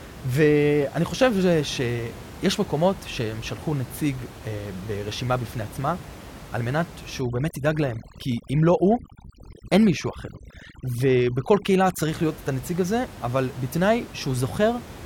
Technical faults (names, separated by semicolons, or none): overdone noise removal